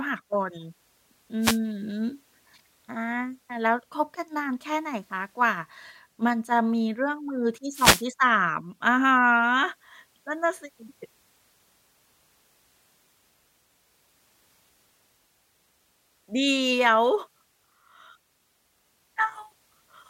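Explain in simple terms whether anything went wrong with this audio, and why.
The radio link from the wireless microphone briefly weakened, a wireless microphone noise hit, as reflected signals cancelled each other out. The receiver's background hiss surged through, giving short bursts of static over the speech from 1.41 to 1.59 s and from 7.72 to 8.06 s.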